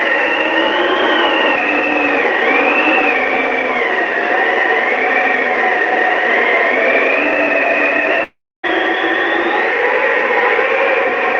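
A long network dropout runs from 8.23 to 8.65 s, likely caused by a stretch of packets failing to reach the receiver. For about 0.4 s nothing new is played. The receiver extends the last sound into a fading buzz, and that tail dies away into roughly 0.28 s of silence. The sound then resumes partway along, and the missing 400 ms never comes back, so the material on either side is joined with a gap cut out of it.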